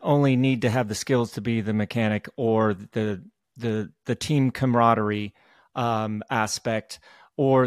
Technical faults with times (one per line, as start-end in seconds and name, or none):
none